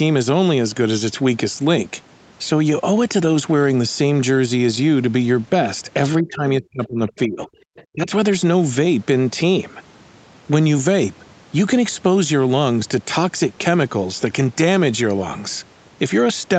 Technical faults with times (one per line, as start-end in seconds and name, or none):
6.20-7.58 speech suppressed in double talk
7.76-7.83 other side's voice leaking through
7.92-8.09 speech suppressed in double talk